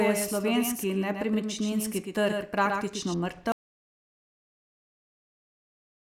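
From the very start until 3.14 s the speech is heard twice: a doubled audio track, with a full-band copy trailing roughly a tenth of a second behind and only about 5 dB quieter. It likely comes from the same signal being captured again through a slower path. The copy has no decay or room colouring, so it sounds like a slapback echo, and at 3.14 s it stops abruptly. On a spectrogram, every onset and harmonic band is repeated as a slightly fainter ghost shifted about 100 ms to the right.

At 3.52 s the audio cuts off mid-flow into an audio dropout to silence that lasts to the end of the clip. The input was likely lost through a disconnected device or failed link while recording carried on writing silence. Nothing remains in the gap, not even room tone or noise floor, so whatever was said after that point is gone. The waveform collapses to a flat line, and the spectrogram turns uniformly empty across all frequencies from that moment onward.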